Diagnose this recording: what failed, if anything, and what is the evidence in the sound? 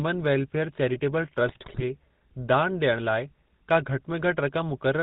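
The codec stage failed. Across the whole speech clip the voice has a buzzy, gravelly roughness. Nothing comes through above 4 kHz. That points to the GSM full-rate codec, at a rate that fits 13 kbit/s. This codec models the vocal tract with a filter. It feeds that filter a coarse train of regular pulses, keeping only every third excitation sample. The missing detail turns into the plainly audible grit heard throughout.

The network stage also failed, at the radio link. From 1.46 to 1.83 s, right after "वेलफेयर चैरिटेबल", the speech breaks into squawks, pops and gargling. These are GSM bit errors. Corrupted bits reached the decoder. Bad filter, pitch or gain values then bent the spectrum or spiked the level frame by frame. The spread of damage fits a couple of percent of bits flipped across most frames in that stretch.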